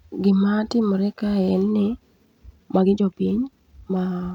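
From 2.23 s to the end of the clip at about 4.35 s, the speech suddenly rushes ahead at roughly 1.41 times its earlier pace, yet its pitch stays where it was. That is a time-stretched section, here a squeeze rather than a stretch. It was likely made by software shortening the passage to fit a set length, dropping short slices of the audio to save time while holding the pitch steady.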